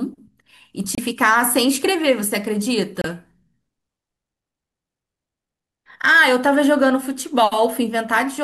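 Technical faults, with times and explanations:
0.95–0.99 s and 3.01–3.06 s, damaged data in a compressed stream: in each, a few tens of milliseconds of corrupted bytes make the decoder misread the frames, lose sync and hunt for the next valid frame header, so the speech breaks into a brief chirp or squawk.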